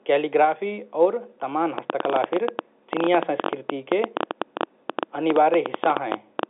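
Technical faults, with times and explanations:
1.78 to 6.44 s, train of clicks: a run of roughly fifty similar clicks at about 10.8 per second, unevenly spaced, rides over the speech and stays audible in the gaps between phrases. The loudest peaks stand around 15 dB above the speech itself. The repeated, uniform pulse shape points to a likely source in interference from nearby equipment or a faulty connection or power supply, heard through the telephone-band line.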